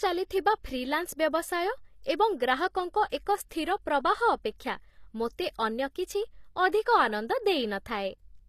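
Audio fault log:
throughout HE-AAC compression: the treble sounds rebuilt rather than real, gritty and metallic on s sounds, with nothing above 14.9 kHz. That's likely band replication copying lower bands upward, and the plainly audible damage fits a low bitrate around 24 kbps.
3.49 s pre-echo: a brief hiss, about 19 ms long, creeps in just before a sharp attack, which sounds softened. The codec spread its quantisation noise across the whole block, so noise meant for the loud onset leaked into the quiet before it.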